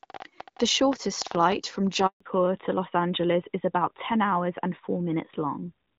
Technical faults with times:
2.06-2.20 handover gap
2.20-5.98 fallback to narrowband

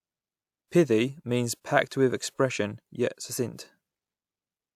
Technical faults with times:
none

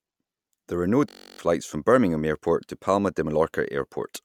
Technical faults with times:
1.09-1.39 system hang loop

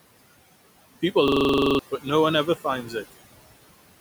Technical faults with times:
0.00-4.00 noise suppressor artifacts
1.28-1.79 system hang loop
2.83-2.94 speech cut by the noise suppressor

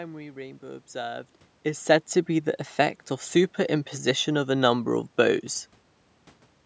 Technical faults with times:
none

